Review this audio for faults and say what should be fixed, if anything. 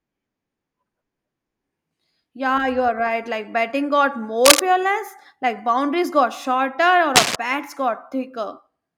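Two bursts of cable scratch noise sit over the speech, from 4.45 to 4.60 s just after "batting got" and from 7.15 to 7.36 s. Each is a dense, ragged rustle lasting about 0.15 to 0.2 s and peaking a few dB above the speech itself. The likely cause is a worn cable or connector being moved, its contact resistance jumping erratically and injecting noise. Replace or reseat the suspect cable and secure it against movement during recording.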